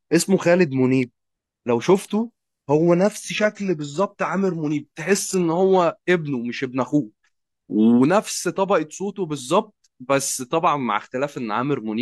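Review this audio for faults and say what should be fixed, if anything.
An adaptive stream at a lower bitrate runs from 1.82 to 5.82 s. The speech suddenly loses its upper treble, and the highs that remain turn synthetic and swirly, with more codec artefacts, all without any gap. At 5.82 s the full quality returns just as abruptly. The sound points to the player switching from a roughly 96 kbit/s AAC rendition down to a 16 kbit/s HE-AAC one while the connection slowed. To prevent it, buffer further ahead and set a higher bitrate floor on the adaptive ladder.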